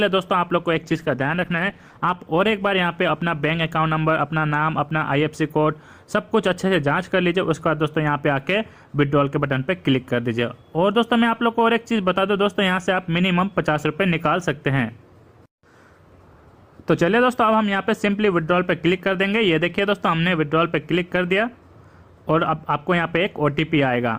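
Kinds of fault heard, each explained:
Call bitrate drop: The connection's estimated bandwidth fell, so the encoder had to squeeze the sound into far fewer bits. From 0.83 s the audio turns coarse and muffled. The high frequencies vanish and a rough, watery texture appears. This fits a rate cut from about 48 kbps to roughly 14 kbps. The lowest rate holds for about 1.35 s. Full clarity returns by 2.25 s, once the bitrate recovers.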